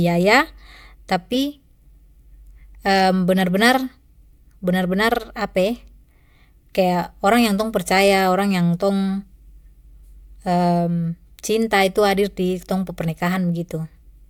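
No technical faults can be heard anywhere in the recording.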